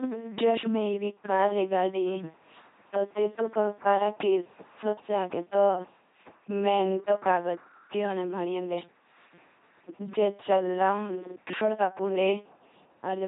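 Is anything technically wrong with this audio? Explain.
Yes. The speech has been passed through an LPC-10 vocoder for its whole length, with heavy damage. The codec keeps only a filter of up to ten poles and drives it from either a pulse train or noise, so each moment is forced to be fully voiced or fully unvoiced. The result is a buzzing, mechanical robot voice, with buzz or hiss where that choice goes wrong. Nothing survives above 3.8 kHz, and the codec runs at 2.4 kbit/s.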